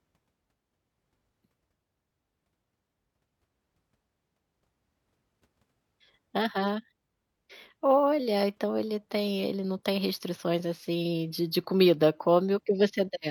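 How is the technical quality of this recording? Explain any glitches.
No technical glitches can be heard anywhere in the recording, and the speech signal stays continuous and intact throughout.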